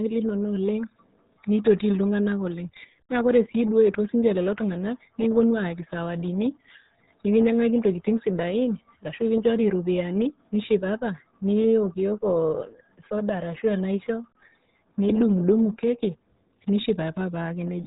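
Throughout, the speech carries heavy RealAudio 14.4 codec damage, muffled and gargly, which fits an 8 kbit/s dial-up stream. A spectrogram shows nothing above 3.8 kHz.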